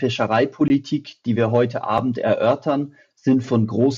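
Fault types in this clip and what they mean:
Block of digital silence: the speech snaps to silence with no fade, leaving a 20 ms hole before "die wir heute" and a 5 ms tick after.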